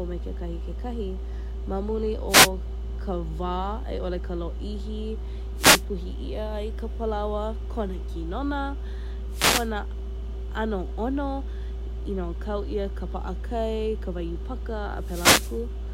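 Speech clip with short bursts of swishing static over the voice at 2.28–2.50 s (after "kekahi ma muli"), 5.56–5.84 s (before "ia ai ka"), 9.30–9.70 s and 14.97–15.64 s. These are wireless microphone noise hits, where the radio signal fades and receiver noise swamps the audio.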